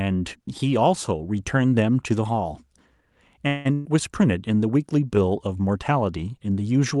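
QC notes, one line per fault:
3.47–3.67 s, call audio freeze: Packets were likely held up in transit, so the jitter buffer ran dry and the receiver extended the last sound as a fading buzz or hiss for about 176 ms. The speech then resumes where it stopped, with nothing lost but everything after it now running later.
3.73–3.87 s, burst of packet loss: Roughly 120 ms of consecutive audio never arrived in time to be played. The receiver stretched the preceding sound into a held buzz or fading hiss for about 122 ms, and then the speech picks up further along with that stretch missing.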